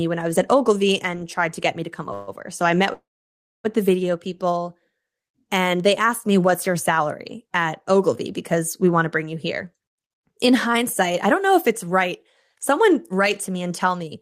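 Speech, with two call audio freezes and two stretches of jitter buffer speed-up. After "get me to come", at 2.13 to 2.29 s, a short 140 ms buzz or hiss stretches the last sound. After "I met", from 2.93 to 3.66 s, the held sound fades into about 610 ms of silence before "the video people". Both likely come from delayed packets emptying the jitter buffer. Nothing is lost; the speech resumes late. From 9.57 to 12.10 s, after "want to bring you", the speech runs about 7% fast. From 12.54 to 14.15 s it runs about 6% fast. Pitch stays unchanged. The receiver is trimming tiny pitch-period slices to shed excess buffered delay, roughly a fifth of a second in the first stretch and a tenth in the second, so the talker sounds hurried.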